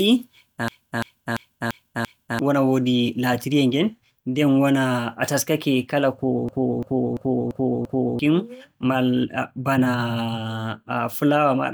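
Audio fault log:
0.68–2.39 s: system hang loop. A 341 ms slice of speech repeats exactly five times, a stutter at about 2.9 per second. The driver froze while the hardware kept replaying one ring buffer, which fits a 16,384-sample buffer. About a second and a half of audio is lost before "wona woodi" resumes.
6.49–8.19 s: system hang loop. The same 341 ms loop repeats five times at about 2.9 per second, giving the same stutter. The system stalled again while the hardware recycled that buffer, and roughly a second and a half of speech is missing.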